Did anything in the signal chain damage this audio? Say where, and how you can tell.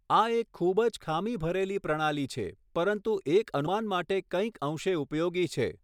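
Yes, at about 3.66 s in this speech the compressed frames were skipped, so the fault sits at the codec or storage stage. The speech jumps forward by around a tenth of a second, which fits a few 32 ms frames dropped whole. Either they were missing from the file or the decoder rejected them as corrupt.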